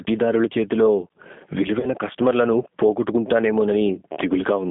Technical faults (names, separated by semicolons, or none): gain pumping; G.729 codec; VoIP packet loss concealed by the speech codec